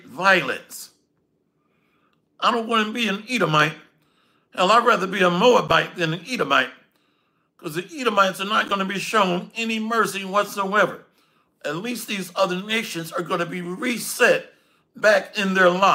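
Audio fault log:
10.89–15.56 s, sample clock jitter: a fine hiss and roughness rides on the sound, swelling with louder, brighter passages and fading in quieter ones. The converter clock wanders by a few microseconds, so errors scale with waveform slope, leaving noise roughly 30 dB below the signal.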